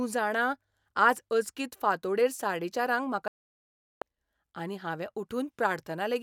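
Digital broadcast dropout from 3.28 to 4.02 s, after "फांतोड़ेर साडेचारांक म्हाका": the receiver muted on lost or corrupt frames, cutting 0.74 s to silence until "आनी हावें".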